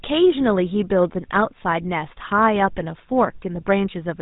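Speech coded with the GSM full-rate codec throughout: nothing above 4 kHz survives, and the pulse-driven excitation adds a plainly audible buzzy, gravelly roughness, consistent with 13 kbps.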